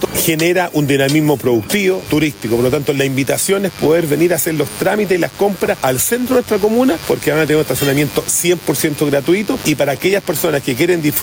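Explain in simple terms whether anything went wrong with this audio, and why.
Two things went wrong. From start to finish there is gain pumping: loud and soft parts are pulled closer together in level, so the sound comes out squashed. The likely cause is the input set far too high, with an automatic limiter pulling it down on every loud moment. A noise gate would instead cut the pauses to silence.

From about 1.79 s to the end there is also a mains buzz, a steady, raspy drone sitting quietly under the sound. It comes from the 50 Hz electricity supply leaking in through something like a dimmer, a power adapter or an unshielded cable, with sharp spikes that spread energy well up the frequency range. A plain mains hum would be a smooth, low tone. This one sounds coarse and gritty, and it begins partway in rather than being present from the start.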